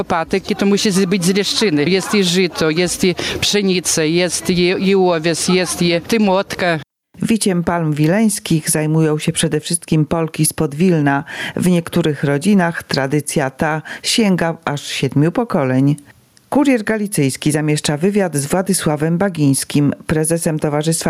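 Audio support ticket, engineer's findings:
Gain pumping, whole clip. Level swing roughly 10 dB. Dynamics squashed. Likely input gain set far too high, with a fast limiter or compressor clamping each peak. Unlike a noise gate, which cuts background to silence, pumping lifts it between sounds.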